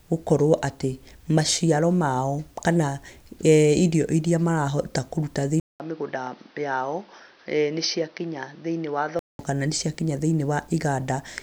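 From 5.6 to 9.39 s, after a 200 ms gap, the speech goes dull, quieter and noisier, with nothing above 6.1 kHz: likely an input switched to a poorer device.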